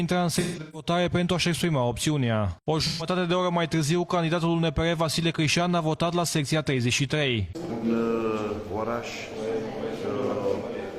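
AAC frame loss with concealment at 0.39–0.89 s, 2.87–3.06 s and 7.47–7.85 s: the decoder refills missing frames from the last spectrum, producing smeared, noisy patches with blurred spectrogram detail.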